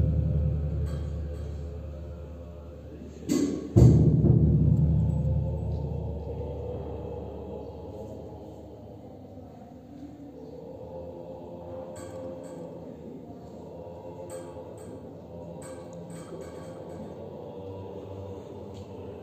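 Throughout, a doubled audio track trails the original by about half a second, a few decibels quieter, full-band and without decay, likely a second, slower capture path, unlike room echo.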